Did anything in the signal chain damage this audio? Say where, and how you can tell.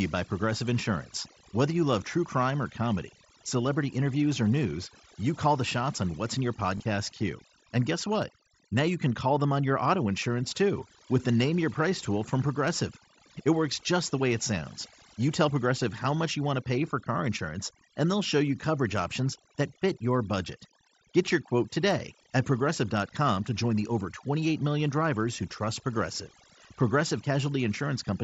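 Yes. At the call-processing stage, noise removal was set too strong across the whole clip. Frequency bands near the noise estimate are gated down or off, so the background breaks into twinkling, warbling specks and quiet parts of the speech go with it. On a spectrogram the noise floor appears as dark gaps scattered with isolated bright flecks.

On the Bluetooth link between headset and phone, there is concealed packet loss from 6.78 to 6.80 s, right after "on what's in your". The receiver filled about 22.5 ms, which fits roughly three lost frames, by repeating the best-matching stretch of recent waveform. On the waveform this shows as a short repeated cycle where the natural signal should continue. The spectrogram shows a brief, evenly repeated harmonic pattern there, inside the mSBC codec's band, which tops out at 8 kHz.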